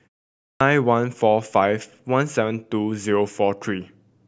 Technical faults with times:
0.50-0.60 clipped start after a pause

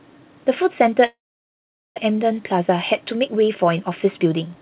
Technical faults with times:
1.06-2.00 long network dropout
2.10-4.56 jitter buffer speed-up

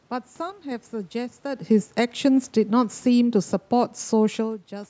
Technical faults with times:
0.50-0.71 sudden gain jump
1.63-4.67 automatic gain falling

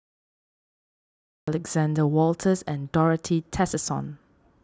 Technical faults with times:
0.00-1.48 cut-off start

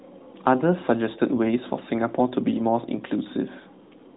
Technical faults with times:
none

